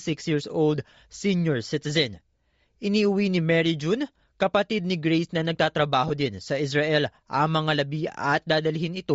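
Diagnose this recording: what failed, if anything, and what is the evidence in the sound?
Bluetooth LC3 compression runs throughout at the codec stage: a grainy, breathy upper band on the speech, likely LC3 zeroing the highs and noise-filling them at a rate that fits 32 kbps.

Lost LE Audio frames occur at 6.08 to 6.11 s, just before "din sa". A brief noisy smear fills the gap where the decoder reused the last spectrum with random signs, fitting two dropped 10 ms frames.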